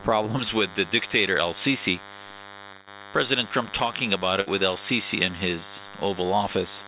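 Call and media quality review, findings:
DECT cordless phone buzz, throughout. Thin, steady buzz at 100 Hz with a dense harmonic series, about 20 dB below the signal. Nearby DECT handset or base: its 10 ms radio bursts are rectified in the analogue audio stage. Unlike mains hum, it is edgy and buzzy rather than smooth.

Pre-emphasis left on, 0.39 s to the end. Thin, bright, sibilant top end, rising about 11 dB from 1 kHz toward 10 kHz on a J.17-shaped curve. The treble boost was applied without the matching de-emphasis. Unlike a mic presence peak, the tilt keeps climbing instead of peaking. The G.711 mu-law path cuts everything above 4 kHz, so the excess shows up as harsh sibilance below that limit.

Burst of packet loss, 2.72 to 2.89 s. The last sound is held as a decaying buzz or hiss for about 145 ms, and about 140 ms of audio is gone. The jitter buffer's concealment extends the previous frame and fades it out. 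Unlike a plain dropout, there is no silence, and the audio resumes ahead of where it stopped.

Burst of packet loss, 4.41 to 4.48 s. A shorter version of the same: about 58 ms is filled with a fading continuation and about 60 ms of audio is missing. It has the same concealment signature as the first burst, which separates it from codec warble or clipping.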